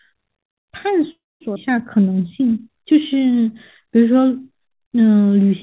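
Speech carried over a narrowband call path, with nothing above 4 kHz, which fits G.711 mu-law at 64 kbps. At 1.12 s the sound stops and a call audio freeze holds it until 1.42 s: the last sound is stretched into a fading tail for about 284 ms, roughly 220 ms of which is silence, and playback then resumes where it stopped, so nothing is lost. This is likely packets held up in transit until the jitter buffer ran dry. Shortly after, between 1.54 and 1.57 s, the audio skips ahead. Roughly 150 ms is dropped and the two sides are joined by only about 10 ms of fill, giving an abrupt jump forward. From 1.98 to 3.37 s a jitter buffer slow-down repeats short pitch periods to rebuild the buffer's reserve. This adds 155 ms and plays the sound at 89% speed with its pitch unchanged, so it sounds drawn out.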